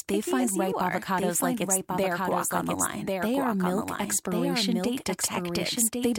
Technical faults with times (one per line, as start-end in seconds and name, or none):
0.00-6.18 doubled audio track